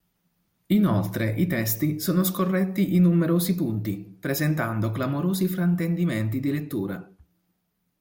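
Nothing here trips up the ear: no dropouts, glitches or other technical faults turn up anywhere in this speech recording.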